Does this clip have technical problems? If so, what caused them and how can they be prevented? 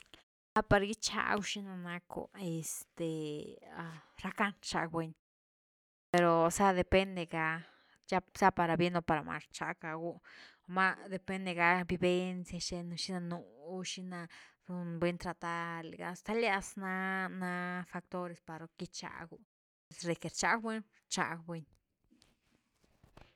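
Yes. The speech has a clipped start after a pause three times: at 0.46 s after a 0.31 s gap, at 6.03 s after a 0.91 s gap, and at 19.81 s after a 0.44 s gap, just before "de que rchag". Each time roughly 100 ms of the first sound is gone, so the word pops out of silence with its onset shaved off. The output path is going idle during the quiet stretch and needs that tenth of a second to wake back up. Keeping the device awake through silence, for example by disabling its power-saving idle mode, would prevent it.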